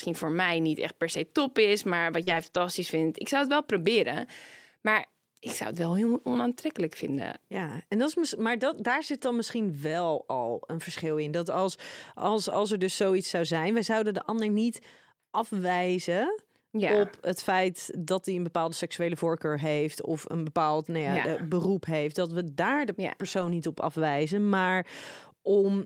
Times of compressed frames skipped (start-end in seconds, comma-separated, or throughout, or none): none